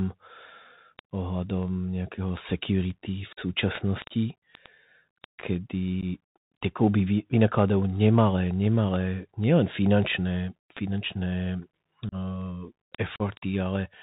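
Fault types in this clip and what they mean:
Bluetooth CVSD headset codec: The speech has been squeezed through the narrowband Bluetooth headset codec. Nothing above 4 kHz survives, s sounds come out scratchy, loud high-frequency moments distort where the adaptive one-bit step can't keep up, and a granular hiss sits under the voice throughout. The damage is plainly audible and fits a 64 kbps CVSD link. Unlike an ordinary low-pass filter, it adds grit and slope distortion, not just dullness.
unconcealed Bluetooth headset packet loss: Short stretches of the speech simply vanish, with nothing patched over the gaps, so the edges are abrupt. There are four holes: about 45 ms at 3.33 s, 15 ms at 6.01 s, 30 ms at 12.09 s and 37.5 ms at 13.16 s. Their lengths point to runs of several lost few-millisecond voice packets. Unlike a concealed dropout, there is no smeared or repeated sound filling the hole, only silence or an idle pattern.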